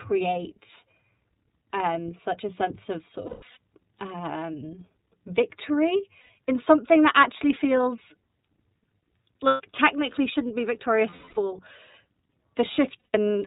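The whole clip passes through the iLBC codec. Nothing above 4 kHz survives. The speech sounds plainly rough and synthetic, which fits 30 ms frames at about 13 kbps.

Lost iLBC frames then break in five times: 3.26 to 3.57 s, after "a sense of sort"; 6.21 to 6.30 s, before "in something that actually"; 9.47 to 9.61 s; 11.10 to 11.38 s, after "technically shouldn't be"; and 12.99 to 13.15 s. In each gap the decoder repeats the last pitch cycle mixed with noise. This produces a held, buzzy vowel. The voice is right again almost at once.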